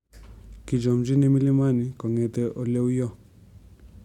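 No technical faults can be heard anywhere in the speech recording; the signal holds steady and continuous throughout.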